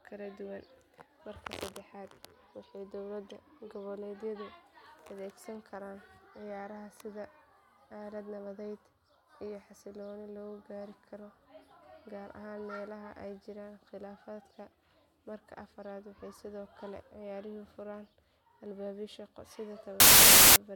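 At 20.00 s the speech gives way to a burst of very loud white noise that runs to 20.56 s, a little over half a second, starting and stopping with hard edges. This is file tags played as audio: an embedded cover picture, stored as compressed data, has been read out as though it were sample values. Compressed image bytes are close to random, so they decode as very loud broadband static.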